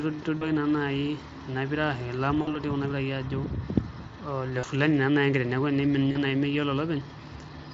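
A speech clip, lightly coded through Speex, with VoIP packet loss concealed by the speech codec at 0.37–0.51 s, 2.41–2.59 s, 4.59–4.65 s before "fulani naa naai" and 6.11–6.20 s before "naai meyiolo". The decoder extrapolates from its last pitch and filter into a fading buzz or coloured noise, visible on a spectrogram as smeared sound losing energy, fitting 40–60 ms gaps.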